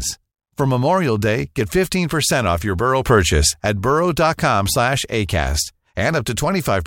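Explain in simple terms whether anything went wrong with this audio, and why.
Yes, something went wrong. From 3.06 to 3.60 s there is a sudden gain jump: the speech and the background noise both get noticeably louder at once, then drop back. This is likely a volume setting that changed instantly instead of fading smoothly.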